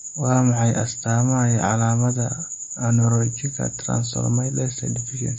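MP3 compression damage runs throughout this speech clip, from start to finish, and it is plainly audible. Nothing is present above about 8.3 kHz, a hard treble ceiling that fits an MP3 encoder starved of bits, likely at a rate near 31 kbps. With so few bits, the encoder discards the high band outright and drops weaker frequency components frame by frame, so the speech carries an unstable, processed coarseness in place of clean detail.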